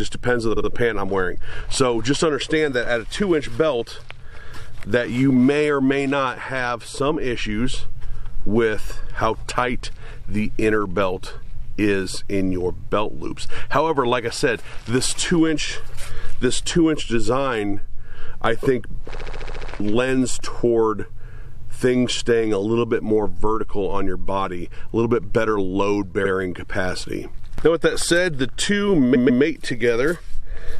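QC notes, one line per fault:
0.56, 19.14, 26.24 and 29.14 s: repeated frames. A block of compressed audio plays again: about 70 ms at the first three and 139 ms at 29.14 s. The result is a stutter. The block repeats twice, eight times, once and twice, adding 0.14, 0.56, 0.07 and 0.28 s.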